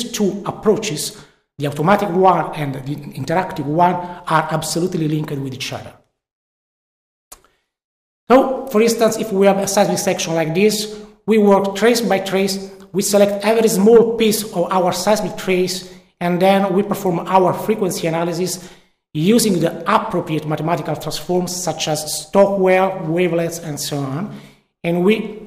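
Nothing is technically wrong with this clip.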